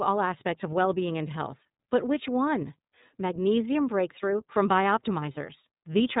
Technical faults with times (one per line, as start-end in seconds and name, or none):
0.00-6.20 iLBC codec